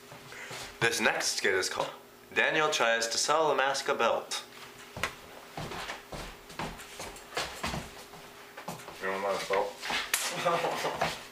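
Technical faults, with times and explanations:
1.79 s: damaged data in a compressed stream. Corrupted bytes made the decoder misread a frame and resync on the next header, producing a brief garbled blip.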